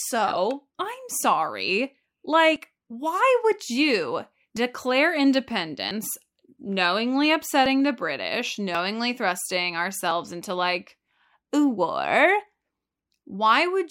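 Six jumps break this speech, each a small skip forward with no gap, at 2.56, 4.57, 5.91, 7.66, 8.75 and 10.11 s. The likely cause is a dropped buffer (overrun), losing about 20 ms mostly, nearer 40 ms at 5.91 s and 70 ms at 4.57 s.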